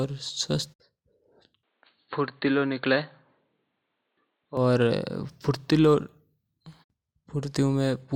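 An input switched to a poorer device from 1.63 to 4.57 s in this speech clip: the sound abruptly turns dull and boxy, with nothing above 4.4 kHz, drops a few decibels in level and carries a faint new background noise, likely from a narrower-band microphone or headset taking over mid-recording.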